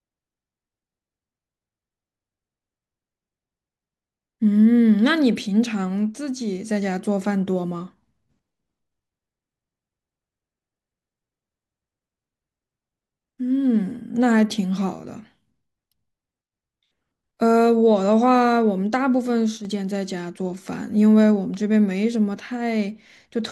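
At 19.58 s the speech drops abruptly in level by about 6 dB for 75 ms, returning at 19.65 s. The likely cause is one channel dropping out: one side of the stereo signal goes silent briefly, so the mono sum keeps only half of the shared content. On the waveform this shows as a sudden narrowing of the envelope with sharp edges; on a spectrogram, a thin vertical band uniformly dimmer across all frequencies.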